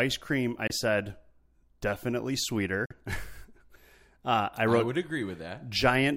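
Bluetooth dropouts at 0.67 to 0.72 s and 2.86 to 2.92 s cut this speech clip to silences. These are likely wireless packets arriving too late and being discarded, with the second gap about twice the first, consistent with one and two lost audio frames of roughly 23 ms each.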